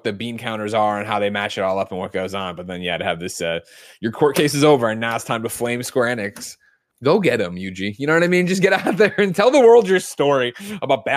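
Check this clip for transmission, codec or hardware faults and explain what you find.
No faults turn up anywhere in the clip. The speech continues without any interruption or disturbance from its first moment to its last.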